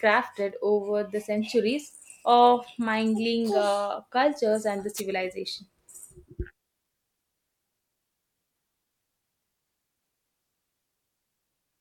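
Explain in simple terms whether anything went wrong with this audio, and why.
Something did go wrong, briefly. At 4.96 seconds there is a wireless microphone noise hit lasting about a twentieth of a second, until 5.01 seconds. It sounds like a quick swish of static over the speech. It happens because the mic sends sound to a receiver by radio. For a moment, radio reflections cancel each other out and the signal fades. The receiver's own background hiss then rises up until the signal returns.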